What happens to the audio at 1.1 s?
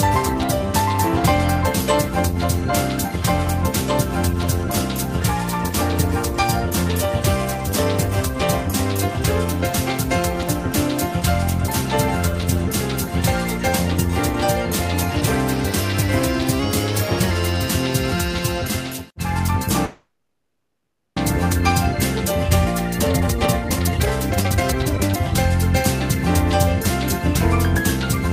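Nothing goes wrong at 1.1 s; the audio plays straight through that moment with no audible fault.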